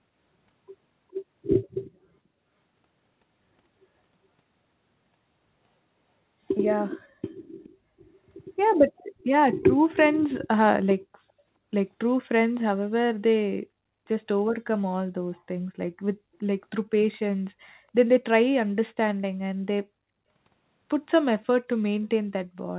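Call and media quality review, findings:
Echo leak: faint delayed repeats of the speech at 7.64–7.70 s and 8.98–9.03 s, about 0.42 s behind, roughly 30 and 35 dB below. Likely far-end loudspeaker pickup not fully removed by its echo canceller, residual returned into the call.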